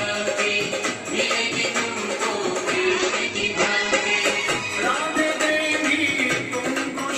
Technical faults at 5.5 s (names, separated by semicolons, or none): call bitrate drop